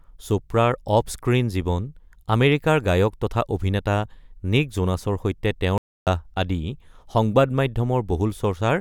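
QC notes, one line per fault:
5.78–6.07 s, playback stall. The speech cuts out mid-flow for about 290 ms, then carries on. The gap is dead silence. The player likely ran short of data or had its thread blocked, so it had nothing to output until it recovered.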